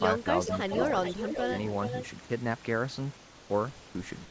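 At 3.17 s the real room background drops out until 3.50 s, and a flat, featureless hiss about 2 dB quieter fills the gap. That's likely comfort noise in place of the background, with the receiver synthesising filler while the sender paused transmission.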